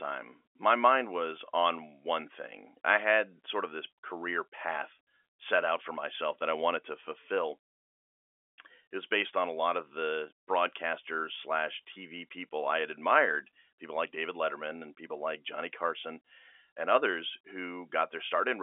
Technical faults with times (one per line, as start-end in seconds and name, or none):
none